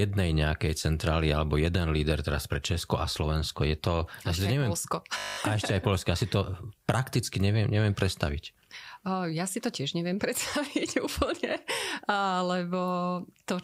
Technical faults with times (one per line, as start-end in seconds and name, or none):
5.18-5.38 system hang loop